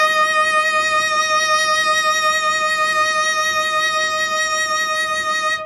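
It's a music clip, and the whole thing has plainly audible MP3 compression damage, likely from a low-bitrate encode somewhere around 40 kbps. The treble stops dead at about 12.1 kHz, and the thinned-out upper detail gives that watery, swirly quality throughout.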